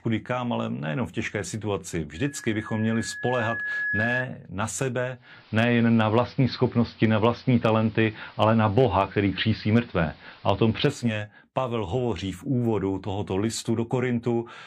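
Loudspeaker feedback squeal starts at 2.15 s, just after "nejenom v těžké situaci", and runs to 4.24 s. A microphone is picking up the loudspeaker it feeds. At 1.7 kHz the loop gain tops one, so that tone feeds on itself. It swells over about two seconds into a steady whistle. At its peak it sits roughly 5 dB above the speech.

At 5.14 s the digital radio blends to analogue. The receiver loses the digital stream and cross-fades to the AM broadcast of the same station. The fade takes 351 ms. The level shifts by about 5 dB. Hiss rises to roughly 30 dB below the speech. The radio blends back to digital at 11.18 s.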